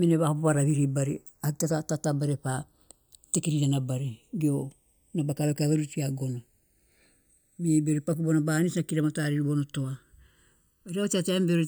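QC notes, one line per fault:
Throughout: channels drifting apart. The left and right sides run on clocks that disagree by something like 50 ppm, so their offset slides to well under a millisecond by the end. Summed to mono, comb notches sweep slowly through the speech as a gradual flanging.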